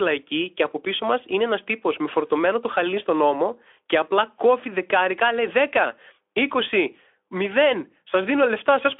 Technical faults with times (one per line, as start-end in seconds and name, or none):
none